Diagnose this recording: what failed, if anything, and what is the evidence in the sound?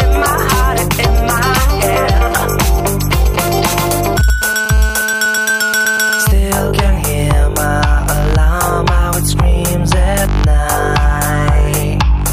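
The analogue wiring picked up GSM signalling bursts from 1.37 to 4.30 s: a galloping run of ticks and brief 217 Hz buzzes, roughly 15 dB under the sound. A nearby 2G phone is handshaking with its network, and the circuit is rectifying those radio bursts.

A 2G phone then goes into a call, and from 4.42 to 6.32 s you get steady GSM phone buzz, a hard, raspy 217 Hz tone full of harmonics, about 13 dB below the signal. The analogue input is again demodulating the phone's transmit bursts.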